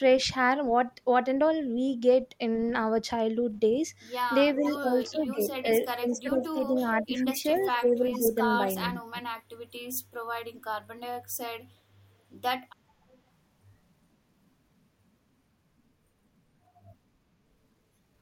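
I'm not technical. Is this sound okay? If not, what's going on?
No, there are two problems here. Between 4.57 and 9.18 seconds, speech suppressed in double talk makes the voice dip and go patchy for about three seconds in total. Likely both people talked at once, and the call's echo cancelling turned everything down.

There's also echo leak: a faint, delayed copy of the voice trailing about 0.42 seconds behind, at 4.64 to 5.29, 5.82 to 6.18, 7.01 to 8.85 and briefly at 13.13 to 13.18 seconds. It's likely from a speakerphone whose echo cancelling missed some sound.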